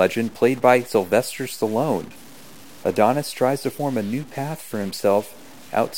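Speech runs through the whole recording with a harsh, buzzy edge, and the pauses between phrases are never clean: they fill with a gritty noise floor instead of falling silent. The likely cause is a stuck bit, one data line held at a fixed value so that about half the samples jump by a step of around -40 dBFS. On a waveform the silent stretches show a fuzzy band instead of a flat line, and a spectrogram shows broadband energy smeared across every gap.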